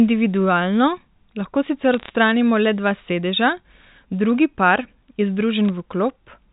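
Sharp ticks and a short burst of crackle break into this telephone-band speech from 1.94 to 2.10 s, with a sparser burst of errors at 5.69 s. These are bit errors on a digital phone line: flipped bits in the mu-law stream each corrupt a single sample.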